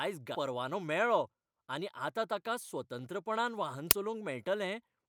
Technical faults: skip ahead; jitter buffer speed-up; uninitialised buffer

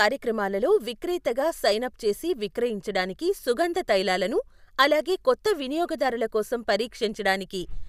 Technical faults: none

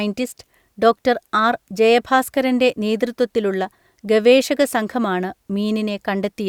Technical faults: none

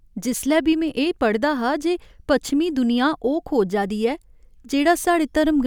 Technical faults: none

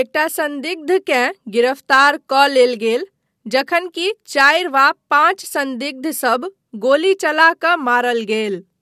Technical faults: none

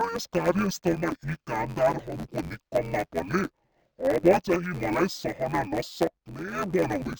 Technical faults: interleaved audio read as planar

